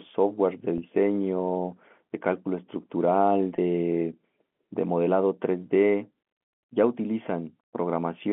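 At 0.78 s there's a brief packet loss with pitch repetition. About 40 ms of the stream went missing, which fits two lost 20 ms packets, and the receiver papered over it by looping the last pitch period, so you get a short, faintly buzzy held tone until 0.82 s. The same thing happens at 3.57 s, a single 20 ms dropout, even shorter, sitting inside the narrow 200 Hz to 3.4 kHz telephone band.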